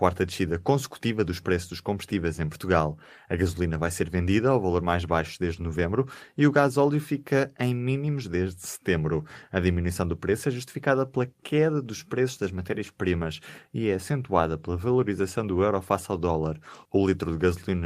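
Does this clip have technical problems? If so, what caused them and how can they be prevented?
No, no technical faults detected.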